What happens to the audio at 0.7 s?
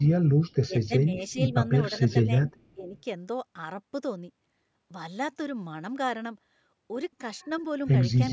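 An echo canceller most likely mistook this talker for loudspeaker echo while both sides were speaking, and turned the speech down along with the echo. That is speech suppressed in double talk, spanning 0.65 to 1.56 s. The speech sinks by as much as around 20 dB. Roughly half a second of that stretch is hit.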